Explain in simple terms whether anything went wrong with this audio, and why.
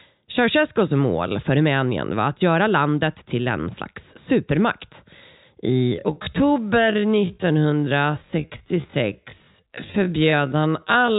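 From 5.64 s to the end, software likely stretched the audio to about 0.57 times normal speed. This time-stretched section drags, yet keeps its pitch.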